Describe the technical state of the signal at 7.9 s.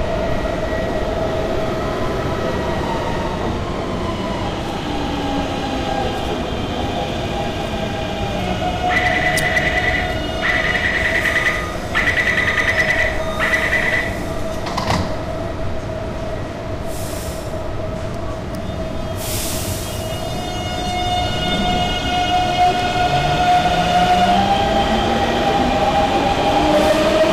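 Hard clipping is present at 7.9 s, as it is across the whole recording rather than at an isolated moment. The signal is driven roughly 9 dB beyond what a stage in the chain can pass, so its highest peaks are sliced flat. Only a small share of samples, around one or two percent, hit that ceiling, but each flattened top adds harmonics high in the spectrum, heard as a gritty crackle riding the louder peaks.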